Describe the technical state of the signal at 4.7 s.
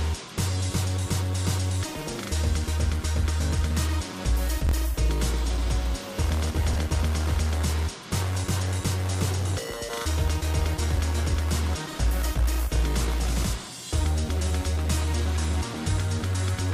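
At 4.67 to 4.71 s, chunks out of order: one chunk of about 23 ms arrived one chunk late and plays after its successor. The swapped pair creates three hard joins, heard as a brief jumbled stutter.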